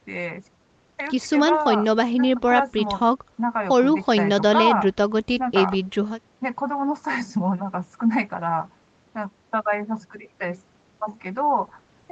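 No faults in this speech; nothing sits above 8 kHz, as expected from the call path, and the usual coding noise fits Opus at around 32 kbps, normal for a call.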